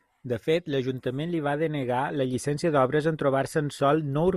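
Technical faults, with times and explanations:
No technical faults can be heard in this speech.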